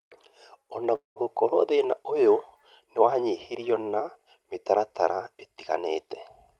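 A speech recording carried over a call path whose sound tops out around 12 kHz, consistent with Opus at roughly 32 kbps, has a brief stall from 0.95 to 1.23 s: the last sound is carried on as a fading buzz or hiss for about 0.2 s, dropping into near-silence, before the speech resumes exactly where it left off with nothing lost. This is a call audio freeze, likely caused by delayed packets draining the jitter buffer, so the receiver concealed the wait and inserted a gap rather than skipping audio.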